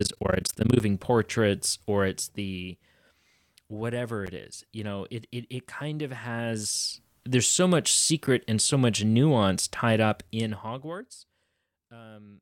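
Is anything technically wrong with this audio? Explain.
Yes. From 0 to 0.8 s the speech has a rough, robotic flutter at around 30 Hz. This is overlap-add ripple: frames were rejoined with overlaps that don't sum evenly, so the level swings by about 60 dB each frame.

Brief hard-edged silences occur at 4.27 s (10 ms, before "it is you know"), 8.27 s (9 ms, between "there's so much" and "and so much nuance") and 10.28 s (6 ms). These are gaps between stream segments: timestamps leave holes that the player fills with silence, consistent with 2-second segment boundaries.

From 10.10 to 11.64 s, just after "so much nuance tied", a ticking zipper noise rides on the speech as the level drops about 25 dB. It comes from applying the change in 1 dB steps, roughly twenty per second, without smoothing.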